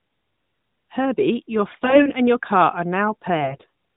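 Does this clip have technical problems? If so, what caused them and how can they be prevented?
Yes. AMR bit errors roughen the speech from 1.72 to 2.11 s, just before "and your car", and again from 3.40 to 3.69 s. Weakly protected codec bits arrived flipped, possibly one in ten or more. Pitch and level hold, but the sound turns hoarse and gargly. Better radio coverage or stronger channel coding prevents this.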